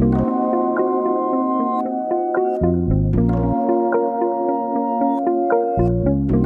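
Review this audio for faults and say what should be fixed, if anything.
Nothing in the recording needs fixing, and no faults can be heard anywhere in it. It can be left as it is.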